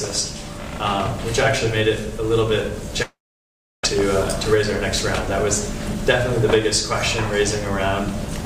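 From 3.02 to 4.00 s the sound smears into a fading buzz, falls silent for 0.68 s, then resumes with a piece missing. A long network dropout is the likely cause: audio stopped arriving, the receiver stretched the last sound, and 0.5 s was lost.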